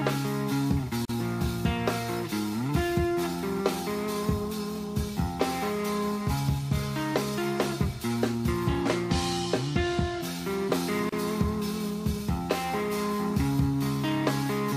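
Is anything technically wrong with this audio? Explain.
Yes, there are two gaps at joins of encoded pieces. At 1.05 s a silence of about 42 ms opens, and at 11.09 s one of about 31 ms, ten seconds apart. Separately encoded segments were butted together untrimmed, so encoder delay and last-frame padding leave short dropouts with smeared edges, then the sound resumes where it stopped.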